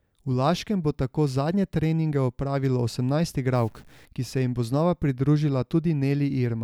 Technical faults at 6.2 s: none

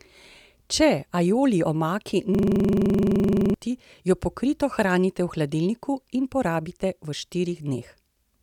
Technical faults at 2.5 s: system hang loop

